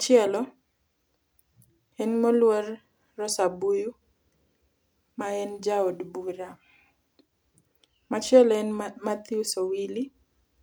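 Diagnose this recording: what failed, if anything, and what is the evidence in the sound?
Nothing in this speech recording points to a failure at any stage, so there's no fault to diagnose here.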